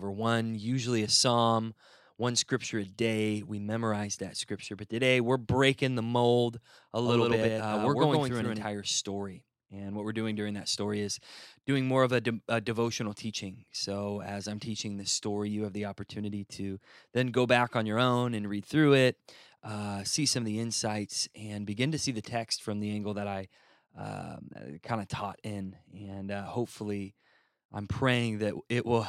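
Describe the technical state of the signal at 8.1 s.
A doubled audio track runs from 7.05 to 8.65 s, so 8.1 s falls inside it. A second full-band copy of the speech follows about a tenth of a second behind the original, at roughly the same loudness. It is likely a second capture through a slower path. The copy carries no decay or room colour, so the speech sounds like a hard slapback. It switches on and off abruptly at both ends of the span.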